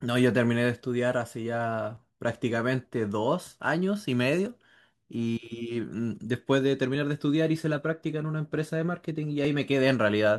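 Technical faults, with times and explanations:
1.97 s, 4.46 s and 9.45 s: audio missing between chunks. Each is a tiny skip where a few milliseconds of speech vanish and the two sides butt together. The 2.5 s spacing points to a recorder likely dropping samples at each chunk boundary.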